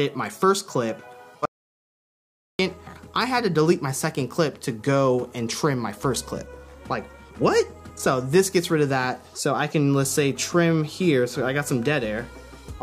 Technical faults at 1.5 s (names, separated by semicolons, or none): audio dropout to silence